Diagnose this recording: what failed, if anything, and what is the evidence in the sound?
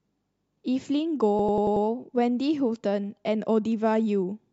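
Machine-gun stutter from 1.39 to 1.86 s as one 93 ms slice repeats five times: a system hang loop, driver stage, fitting a 4096-sample ring buffer.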